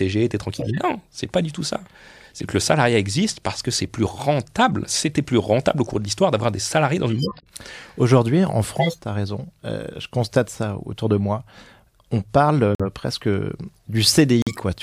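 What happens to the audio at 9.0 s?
Right around there you're hearing the tail end of a corrupt frame decoded, running from 8.76 to 8.99 s. A few damaged compressed frames got played anyway, so misread gains and codes throw energy into the wrong frequencies, giving a loud burst of error peaking around -5 dBFS over the speech.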